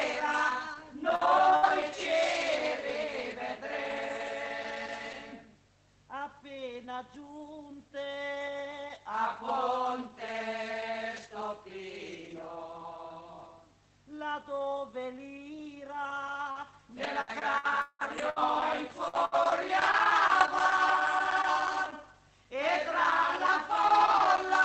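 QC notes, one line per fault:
1.15 to 1.22 s, short stall from a late packet: one packet showed up about 40 ms late and the jitter buffer ran dry, so the receiver stretched the last bit of sound by 40 ms, then picked up right where it left off. Nothing's lost, just a brief held, slightly buzzy smear.
1.19 to 1.25 s, 1.63 to 1.69 s and 1.99 to 2.05 s, lost packet rebuilt from error correction: three separate packets went missing, and each was replaced with the low-bitrate copy carried in the following packet. There's no gap, but each 60 ms patch sounds grainier and noisier than its surroundings.
1.56 to 1.66 s, burst of packet loss: a run of packets didn't make it, so the decoder held and faded the last sound for about 63 ms, then resumed further along. About 60 ms of audio is simply gone, heard as a short buzz or hiss then a jump.
16.51 to 20.46 s, repeated packet loss (robotic sound): eight separate gaps in about four seconds, the longest 179 ms. 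Each gets patched by extending the last sound, adding up to roughly half a second of fill with 480 ms missing, plus about a second of rebuilt audio. The result is choppy, with pieces missing.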